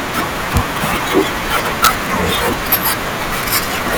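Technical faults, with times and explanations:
0.57 s, 1.84–1.87 s and 2.73–2.75 s, integer overflow: speech peaks exceeded the integer limit by up to about 2 dB and wrapped to the opposite sign instead of being limited, giving violent full-range cracks far sharper than clipping.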